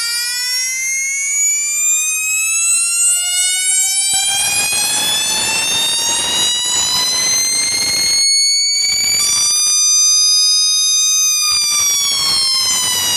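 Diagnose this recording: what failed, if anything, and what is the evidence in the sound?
Nothing failed in this recording, and the sound carries no evidence of a fault at any stage.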